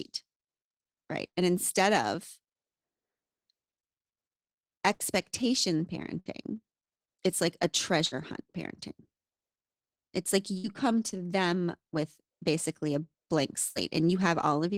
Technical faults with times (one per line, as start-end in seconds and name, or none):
1.27-1.36 burst of packet loss
4.93-5.03 burst of packet loss
6.20-6.29 burst of packet loss
8.06-8.15 burst of packet loss
10.58-10.67 burst of packet loss
13.70-13.78 burst of packet loss